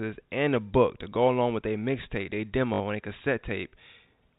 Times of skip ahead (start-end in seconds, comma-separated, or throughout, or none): none